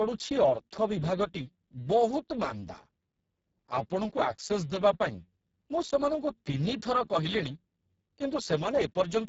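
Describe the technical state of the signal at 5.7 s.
At 5.7 s the speech carries the heavy damage of the Speex codec, present across the whole clip. The sound points to a very low bitrate setting, near 6 kbps, so this CELP coder has too few bits to rebuild the excitation. The speech sounds hoarse, buzzy and close to robotic. A spectrogram shows smeared, grainy harmonics, a noise-like haze in the upper band, and nothing above about 7.7 kHz.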